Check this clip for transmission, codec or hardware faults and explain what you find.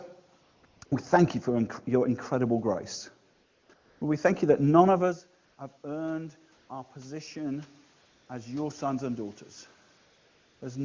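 Two things stand out: AMR comfort noise in the pauses and some automatic gain rising in the middle.

The AMR comfort noise turns up nine times, between 0.43 s and 10.61 s, in gaps of 60 to 640 ms. There's a cluster just before "we thank you for", two right after "your incredible grace", one ending just before "as your sons and", and the longest at 9.97 to 10.61 s. Each time, the phone decided nobody was talking and stopped sending speech frames. The far end then filled in a synthetic hiss built from a rough sketch of the background's level and tone. So the real room noise drops out and a smoother, steadier wash switches in and out in its place.

The automatic gain rising runs from 5.83 to 7.75 s. Around 5 s the talker seems to move away from the mic, and the level drops by about 15 dB. The gain control hears the quieter input and slowly brings it back up, by about 4 dB over nearly two seconds. 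You hear the voice and the room noise swell together, a gradual creep rather than a jump. The HD Voice coding underneath sounds like a high rate, with little or no audible codec damage.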